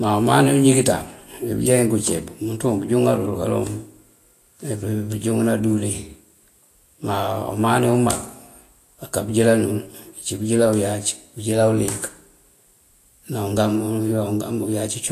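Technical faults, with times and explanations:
Throughout, Vorbis compression: the speech was likely passed through a low-rate Vorbis encoder, and the plainly audible damage fits about 34 kbps. Nothing sounds above 14.2 kHz, and the coarsely quantised treble turns to hiss and grain, roughening tones and blurring attacks.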